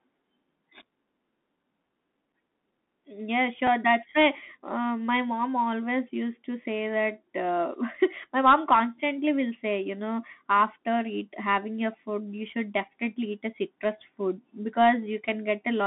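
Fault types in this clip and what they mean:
Bluetooth CVSD headset codec: One-bit adaptive coding squeezes the speech into roughly 200 Hz to 3.7 kHz. Sibilants turn scratchy, with grainy hiss underneath throughout.
Bluetooth headset packet repeated: At 3.67 s one lost packet is replaced by the previous one, about 3.8 ms long. It gives a single small tick.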